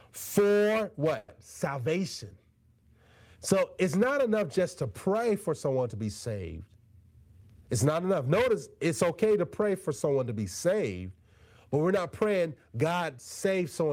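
At 1.17 s the speech stalls for about 110 ms, from 1.17 to 1.30 s, and the last sound is stretched into a brief fading buzz or hiss rather than dropping to silence. This is a call audio freeze, likely caused by packets arriving late and the jitter buffer running dry. What separates it from a packet-loss dropout is that nothing is skipped. The speech picks up exactly where it stopped, so the gap is inserted and everything after it runs about 110 ms later.

From 7.04 to 7.69 s the speech plays at roughly 115% speed, a jitter buffer speed-up. The buffer had built up more delay than it aims for, so the receiver repeatedly cut out pitch-period-sized slices, about a tenth of a second in total, to catch up. The phrasing sounds hurried, but the pitch stays put. That distinguishes it from a resampling or clock error, which would raise the pitch along with the tempo.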